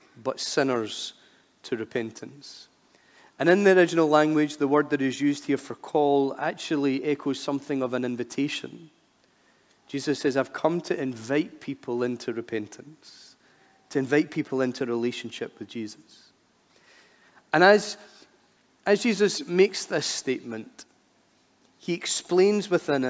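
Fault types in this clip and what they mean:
No faults detected; no dropouts, clipping, noise bursts or timing errors anywhere in the clip.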